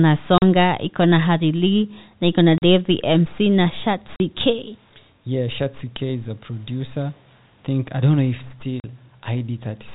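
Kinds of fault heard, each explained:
Packet loss filled with silence: The speech drops out abruptly four times, each gap about 40 ms long with hard edges, at 0.38 s just before "iko na harili na", at 2.58 s right after "na harili na iko", at 4.16 s just before "k yeah shatsi k", and at 8.8 s. Each hole matches two consecutive 20 ms packets going missing in transit, with the receiver inserting plain silence instead of concealing the loss, so the waveform is cut off and restarts without any smoothing.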